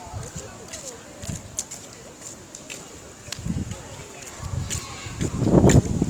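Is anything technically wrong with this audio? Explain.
Yes. Throughout, the sound turns grainy and rough with a noisy texture on tones, likely from Opus compression at a low bitrate around 24 kbps in its music mode. A spectrogram would show smeared, noise-filled bands instead of clean partials.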